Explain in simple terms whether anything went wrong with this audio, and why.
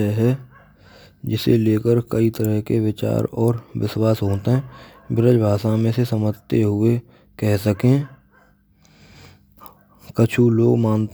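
Nothing went wrong with this speech recording. At no point does the sound show a technical problem that a listener would notice.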